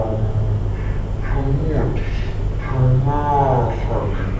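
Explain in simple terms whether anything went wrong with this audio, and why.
Wrong sample rate throughout: the speech plays at half speed and a full octave lower, which fits audio recorded at 32 kHz but played at 16 kHz.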